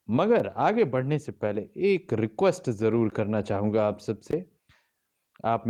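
Blocks of digital silence occur at 0.39 s, 3.10 s and 4.31 s, lasting about 5 ms, 17 ms and 20 ms. The speech drops abruptly to silence and back, giving a tick at 0.39 s and short holes at the later two.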